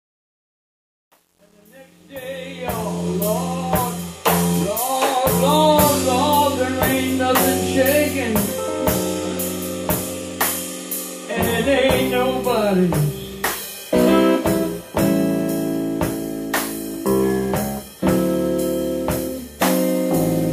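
From 0.0 to 3.08 s the fade-in shows truncation distortion. The gain stage dropped low-order bits without dither, which fits a 9-bit path. Through about 2.54 s the quiet rise sounds gritty. The waveform shows stair-stepped squares, and the spectrogram shows broadband grainy hash.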